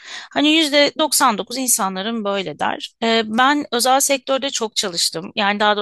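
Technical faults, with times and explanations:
No technical faults are present in this speech recording. There is nothing to time or explain.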